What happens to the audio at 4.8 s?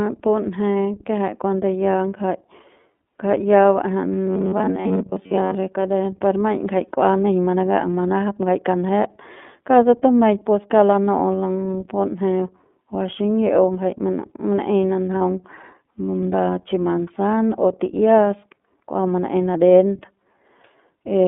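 Robotic sound from repeated short buffers runs from 4.26 s to 5.55 s, covering the 4.8 s mark. The likely cause is new audio arriving too slowly, so the playback side keeps looping a short slice, roughly 10.7 ms long, while most of the real speech in that stretch is skipped. Those repeats impose a fixed pitch of about 93.8 Hz, so the speech becomes a rigid, metallic buzz that only loosely follows its original shape. Underneath, the iLBC codec's narrowband, slightly rough quality is also present at this point.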